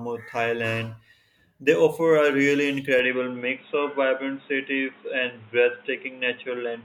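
At 2.99 s the speech suddenly turns dull and boxy and stays that way to the end, with nothing above 3.8 kHz. The change comes without a gap and without any clear jump in loudness, but a new background noise appears, roughly 30 dB below the speech. The likely cause is the input switched to a poorer device, such as another microphone or a headset's call mode, whose narrower band and own noise replace the original pickup.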